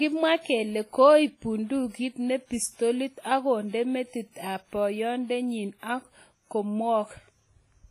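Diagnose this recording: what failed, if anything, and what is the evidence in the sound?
Codec stage: the speech rings and washes throughout, hiss pumping along with it, nothing above 15 kHz, likely heavy WMA compression, fitting about 24 kbps.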